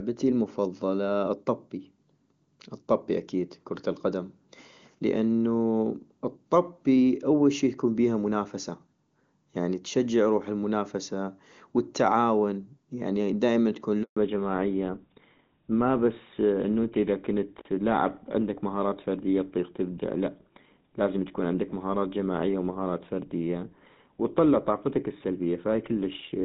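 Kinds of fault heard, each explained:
handover gap: the call switches networks and no frames arrive for about 140 ms at 14.03 s, so the speech cuts to silence rather than stuttering or repeating.
fallback to narrowband: after the gap everything above 4 kHz is gone, dulling the speech for the rest of the clip; unlike a filter, it starts exactly at the network switch.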